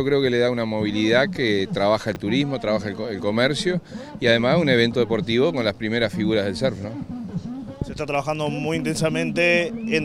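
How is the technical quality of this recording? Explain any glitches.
The recording has one glitch: a brief stretch of chunks out of order at 2.12 to 2.16 s. A 10 ms chunk of audio reached the output three chunks late, so it plays after the three 10 ms pieces that should have followed it. Nothing is missing, but the 40 ms run is reshuffled and joined at three hard edges, giving a quick jumbled moment. A waveform would show three abrupt discontinuities there, and a spectrogram thin vertical broadband lines at each join.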